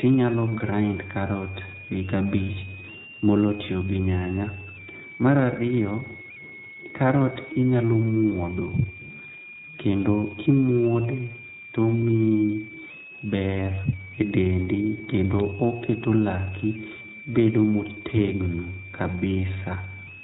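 Speech, and it comes through the iLBC codec, so it's band-limited to about 4 kHz and has that slightly rough, synthetic edge. The damage is plainly audible, and the frame timing fits the 30 ms, 13.33 kbps mode, where each frame's excitation is coded independently. On top of that, a switching supply whistle runs all the way through: a thin high tone between about 2.2 and 2.8 kHz, sitting roughly 15 dB under the speech. That's a power supply in audible burst mode or beating against another supply. Then at 7.53 to 7.57 s you get lost iLBC frames, about 30 ms, which fits a single dropped frame. The decoder fills the hole by repeating the last pitch cycle mixed with noise, so it comes out as a short held, slightly buzzy or breathy vowel. Because the frames stand alone, the voice snaps back right after.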